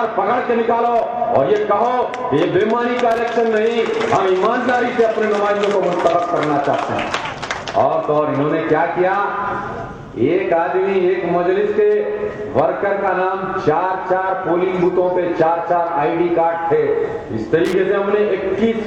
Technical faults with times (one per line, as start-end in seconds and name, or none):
3.11-3.20 loose connector crackle
17.65-17.73 loose connector crackle